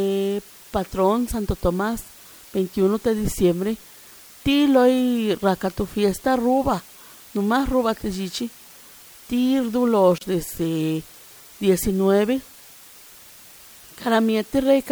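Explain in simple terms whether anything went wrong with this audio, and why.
Two things went wrong. First, low bit depth with dither: the speech was stored with very few steps of loudness, a hiss level that points to about 7 bits, with noise mixed in before rounding. That turns the rounding error into a steady, even hiss under the whole recording, with no crunchy distortion.

Second, a gap at a join of encoded pieces: the audio was compressed in separate parts and stuck together without trimming the silent padding each part carries. At about 10.18 s the speech drops out for roughly 31 milliseconds, then resumes where it left off.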